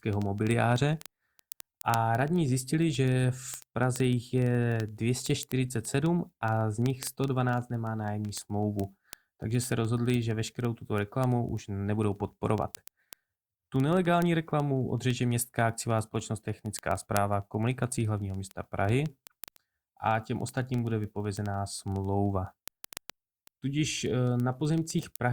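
A receiving device runs on its own clock, unlocked from the sender's and off by around 500 parts per million, so it drops or repeats one sample roughly every 40 ms. From 0.13 s to the end, the speech carries word clock ticks: hundreds of sharp clicks at a steady rate.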